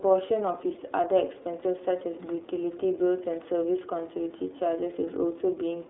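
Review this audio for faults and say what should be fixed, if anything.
iLBC codec damage runs through the whole speech clip, with nothing above 3.8 kHz and a 300 Hz to 3.7 kHz line band. Each frame's excitation is coded independently, giving a plainly rough, synthetic texture that fits the 13.33 kbps, 30 ms frame mode. To prevent it, capture or route the call through a wideband codec instead of narrowband iLBC.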